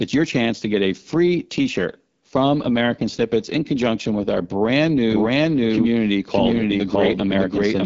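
The whole clip passes through the AMR wideband (HD Voice) codec at a low rate, near 8.85 kbit/s, leaving speech rough and raspy, with nothing above 7.5 kHz. From 5.10 s to the end, a second capture path likely adds a doubled audio track: an equally loud, dry copy trailing around 0.7 s behind, starting abruptly.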